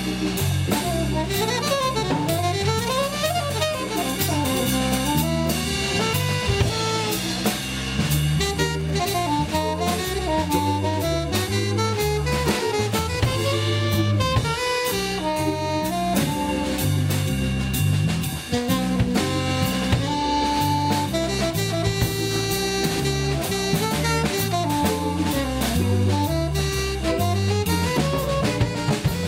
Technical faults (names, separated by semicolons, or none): GSM signalling bursts